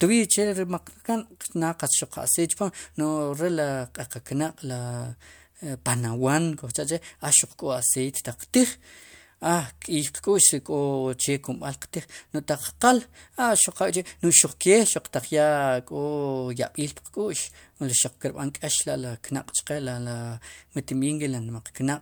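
No technical fault can be heard anywhere in the speech. There is nothing to place in time or measure.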